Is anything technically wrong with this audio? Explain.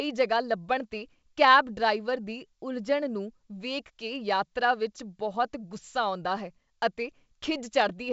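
No, nothing in this speech clip is technically wrong. It has the sound of G.722 wideband telephone coding, most likely at its full 64 kbit/s rate, with nothing above about 7 kHz or a little above and at most a faint trace of the coding.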